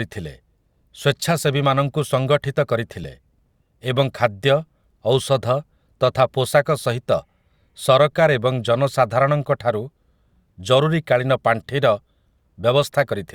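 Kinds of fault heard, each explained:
No technical fault can be heard anywhere in the speech; the signal stays steady and continuous throughout.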